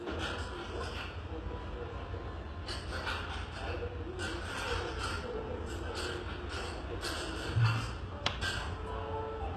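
From start to finish, the treble sounds bright but false, with nothing above 12.3 kHz. High detail turns gritty and metallic. The likely cause is HE-AAC compression at a very low bitrate, fitting about 16 kbps, rebuilding the upper band from copied lower bands.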